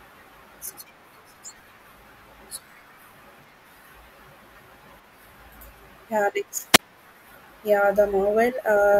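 Right around 6.73 s there's a wireless microphone squelch dropout, running through about 6.79 s. The FM radio link from the mic faded badly enough that the receiver's squelch kicked in and muted the output. You hear a quick swell of hiss as the signal weakens, then a hole of near silence lasting about 31 ms, and then the speech comes back once the receiver locks on again. It's a short gap.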